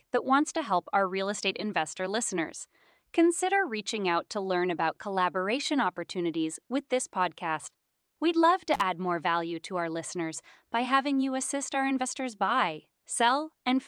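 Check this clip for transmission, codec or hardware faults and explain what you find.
One fault stands out: an intermittent contact at 8.74 to 8.81 s, just before "add more value to". A loose plug or cable connection briefly breaks, so the speech drops out for roughly 42 ms with crackle at each edge where the contact scrapes open and shut, leaving only faint hiss in the gap. On a waveform this shows as a sudden near-flat stretch bracketed by sharp spikes; a spectrogram shows broadband vertical streaks framing a short, low-energy hole.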